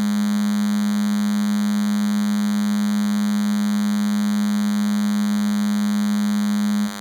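A steady, thin buzz runs under the music from start to finish, sitting roughly 15 dB below it and rich in harmonics above its 100 Hz base. This is DECT cordless phone buzz: a nearby handset or base station transmits a burst every 10 ms, and the audio circuitry rectifies those bursts into sound.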